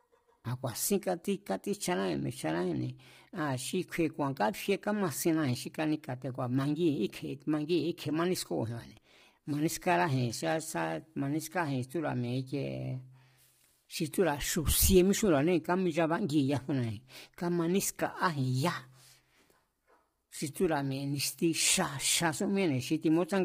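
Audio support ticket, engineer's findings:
Speech rough and grainy for the full clip. Noise filling the gaps between pitch harmonics; harmonic structure smeared. Nothing above 15.6 kHz. Likely low-delay AAC compression (AAC-ELD, as used on call paths). Its short frames resolve harmonics poorly and spend bits fast, so damage is heavy, consistent with a stream around 24 kbps.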